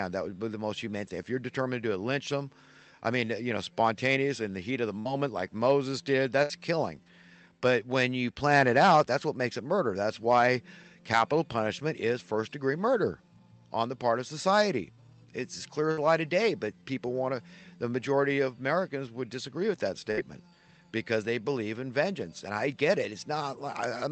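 Audio carried over a WebRTC call path, with a top end stopping near 8 kHz that fits Opus at roughly 32 kbps, shows four bursts of packet loss at 4.99 to 5.08, 6.43 to 6.52, 15.91 to 16.00 and 20.11 to 20.20 s. Each time about 60 ms of audio was lost, and the receiver filled the gap by stretching the last sound into a fading buzz or hiss before the audio resumed further on. A spectrogram shows smeared, decaying bands followed by a discontinuity, and the waveform shows an envelope that sags and then jumps back.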